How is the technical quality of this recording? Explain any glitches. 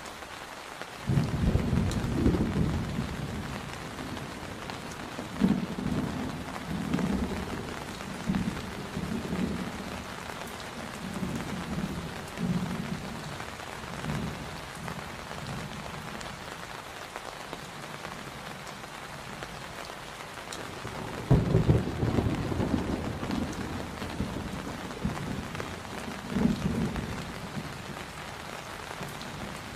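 The recording has one fault that runs through its whole length: sample clock jitter. A grainy hiss rides on the sound, growing with loud and bright passages and disappearing in the quiet gaps. The cause is an unsteady converter clock, with timing wander of roughly 4 microseconds, so each sample lands a little early or late. Fast-moving, high-frequency parts of the waveform turn that timing error into an amplitude error, here sitting about 35 dB below the signal.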